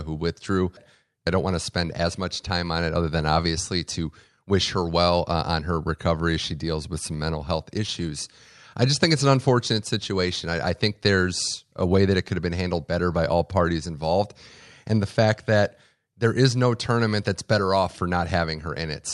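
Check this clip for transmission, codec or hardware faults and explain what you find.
Nothing stood out on listening to the speech as it came over the call link.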